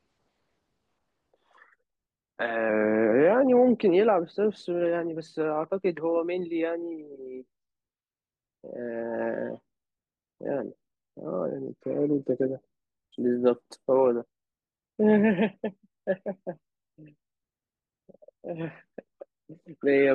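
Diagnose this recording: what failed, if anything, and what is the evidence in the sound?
From 11.47 s to 12.77 s the speech slows by 5.6% and drops a semitone, then snaps back. This is likely a drift correction step in the buffer stage: clock-matching software lowered the playback rate in one jump to refill its buffer.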